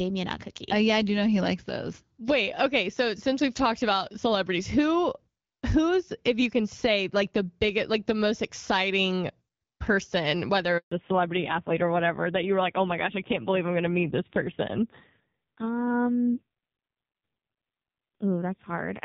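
Right after "most exciting person whether", at 10.77 s, there's a handover gap: the call hops networks, no speech frames arrive, and the sound drops to silence for about 140 ms until 10.92 s. Whatever was said in that stretch is simply gone.

From 10.92 s to the end, there's a fallback to narrowband. Before the switch, the light AMR wideband (HD Voice) coding sounds like a 12.65 kbit/s stream. Afterwards nothing survives above 4 kHz, and the dull, rough texture fits AMR-NB at around 5.9 kbit/s.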